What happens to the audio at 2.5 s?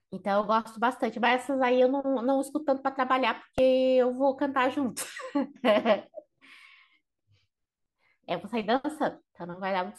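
Nothing goes wrong at 2.5 s; the speech runs on intact through that point with no fault to be heard.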